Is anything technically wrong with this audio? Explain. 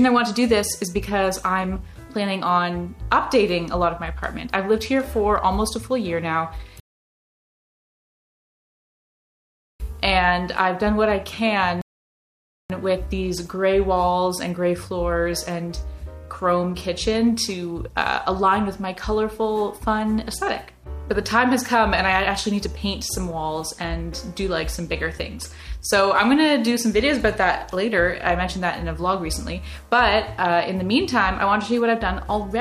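Yes. Two rebuffering stalls occur, at 6.80 to 9.80 s and 11.82 to 12.70 s: playback outran its download, so the audio falls silent, then resumes exactly where it stopped, adding 3.0 s and 0.88 s.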